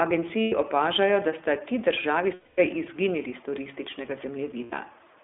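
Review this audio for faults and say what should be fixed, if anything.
The speech sounds thin, rough and slightly synthetic, band-limited to roughly 250 Hz to 3.6 kHz. This is iLBC codec coding, consistent with its 15.2 kbps, 20 ms frame mode.

Brief held, buzzy vowel-like fills occur at 0.42–0.53 s (just before "opažajo da sta ti"), 2.34–2.59 s (between "da sta ti državi" and "izginili s turističnega"), and 4.64–4.75 s (after "izginili s turističnega"). These are lost iLBC frames, concealed by the decoder repeating the last pitch cycle.

To prevent this, send the audio over a wideband codec on a network path with low packet loss, or add forward error correction.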